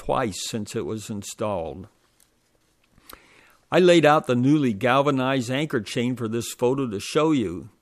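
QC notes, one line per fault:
Nothing stood out on listening.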